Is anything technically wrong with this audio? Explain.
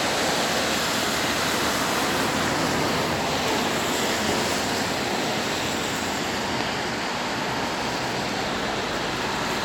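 No, nothing technically wrong can be heard in this recording of sounds. There are no faults to explain.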